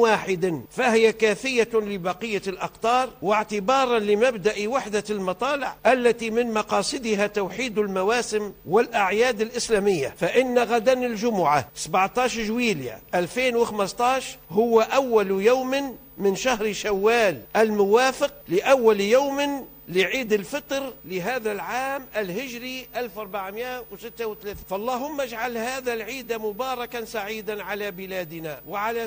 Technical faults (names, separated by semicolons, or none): none